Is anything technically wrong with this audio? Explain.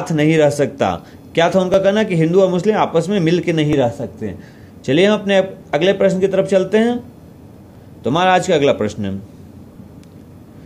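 Yes, there are periodic USB or driver dropouts from 1.74 s to 9.75 s. Every 2.0 s the audio path stalls and a few milliseconds of samples are skipped outright. Each splice leaves a short, evenly spaced tick, about five in all.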